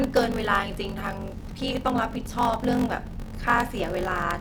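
Throughout, a block size mismatch (padded) zero-fills each block's tail, giving a 46.9 Hz buzz, speech slowed to 0.861x with its timbre kept, and regular flat waveform gaps.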